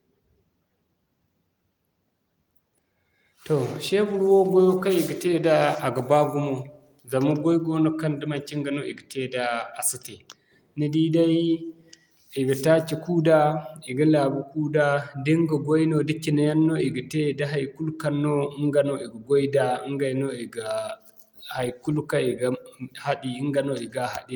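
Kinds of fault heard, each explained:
Nothing wrong turns up anywhere in this speech recording, so there's no kind of fault to list here.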